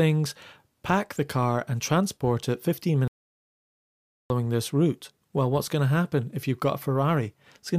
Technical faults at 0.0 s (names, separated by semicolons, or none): none